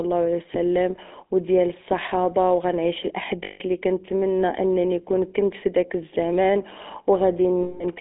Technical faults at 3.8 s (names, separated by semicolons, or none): GSM full-rate codec; lost GSM frames